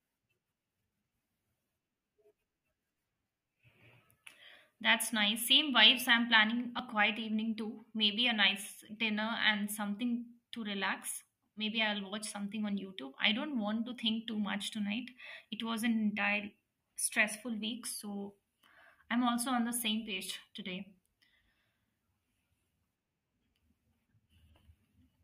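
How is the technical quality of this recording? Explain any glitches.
The recording has one glitch, an instance of audio missing between chunks at 6.79 s. The likely cause is a recorder or processor handling the speech in blocks of about 10 s and dropping a sliver of input while it closes one block and opens the next. Roughly 20 ms of audio is lost, and the material on either side is butted straight together with no gap, so the speech jumps forward very briefly at that point.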